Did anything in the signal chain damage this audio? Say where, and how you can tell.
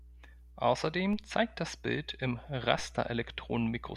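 Yes. The analogue wiring has introduced mains hum: a steady 60 Hz tone runs under the speech for the whole clip, with low harmonics, at roughly 20 dB below the speech. Because it is constant and sits exactly on the power-line frequency, it is not acoustic room noise. It points to a ground loop or a transformer coupling the supply into the signal path before conversion.

The converter or input switching has caused two DC steps, at 1.13 s, just before "zeigt das", and at 2.79 s. At each one the waveform's zero line jumps by about -34 dBFS, heard as a low thump while the speech carries on unchanged. The offset then bleeds away rather than holding, as it would behind a high-pass of about 5 Hz. That points to an offset being switched in or a converter recalibrating.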